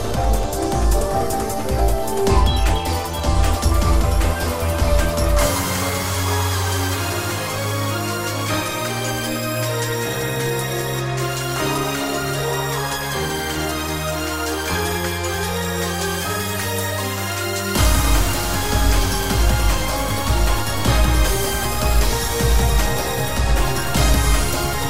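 No technical faults can be heard anywhere in the clip. There is no moment in the audio that needs a timestamp or further comment.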